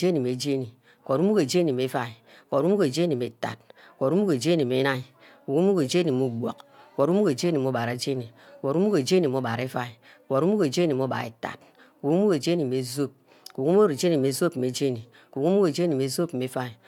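No technical faults are audible.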